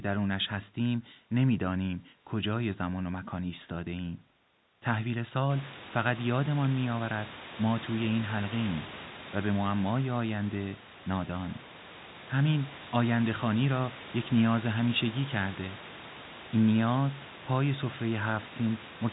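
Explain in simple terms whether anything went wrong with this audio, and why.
Nothing went wrong here.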